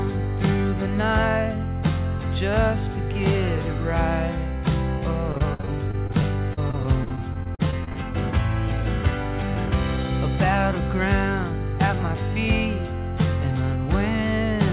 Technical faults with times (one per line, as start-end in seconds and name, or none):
5.32-7.97 repeated packet loss (robotic sound)